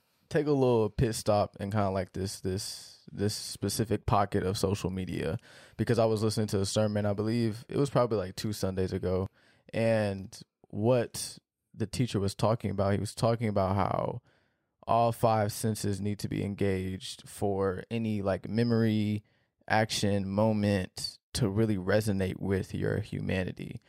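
Two abrupt skips interrupt this speech clip, one at 9.26 s just before "and what the teacher" and one at 19.24 s between "for any like memory" and "action moment to really", each dropping about 20 ms with the sides butted together. These 10-second-spaced jumps are audio missing between chunks, likely lost during chunk handovers.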